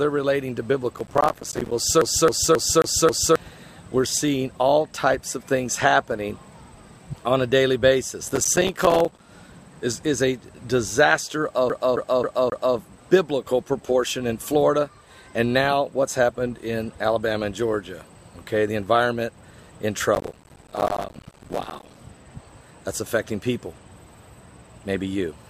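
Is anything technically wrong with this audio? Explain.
Yes, there are two kinds of fault.

Processor overload crackle appears at 0.96 to 1.72 s, 8.28 to 9.25 s and 20.15 to 22.0 s. The processor can't fill each small audio buffer before its deadline, so many short stretches drop to silence in rapid succession. The spacing of the tiny gaps fits buffers of around 5 ms. Each silent hole has hard edges, and together they make a gritty tearing crackle that sits on the sound.

CD stuck on one turn occurs at 2.01 to 3.36 s and 11.70 to 12.77 s. A scratch keeps throwing the laser back to the same spot on every rotation, so one 268 ms slice of audio plays over and over, five times in the first event and four in the second. A brief mute marks each jump, which gives the fast, evenly spaced stutter of a skipping disc.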